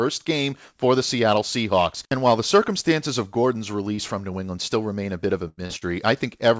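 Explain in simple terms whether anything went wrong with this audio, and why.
Yes, the call lost pieces of audio in transit. In a short concealed packet loss, about 30 ms arrived too late, so the receiver guessed by stretching the sound just before it. You hear this as a brief smear or wobble at 3.95, 5.66 and 5.78 s.

The worst moment is a burst of packet loss from 5.48 to 5.60 s, just after "a bit of a". About 90 ms in a row went missing, so the receiver held the last sound as a fading buzz or hiss, then jumped ahead with that stretch gone.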